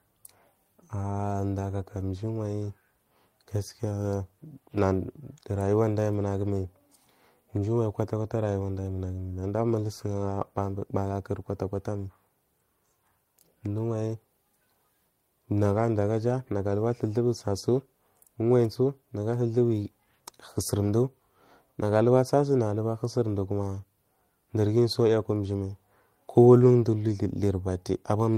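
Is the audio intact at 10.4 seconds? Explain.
Yes, at 10.4 seconds the speech runs through cleanly, with no dropout, click, distortion or other fault audible at that moment.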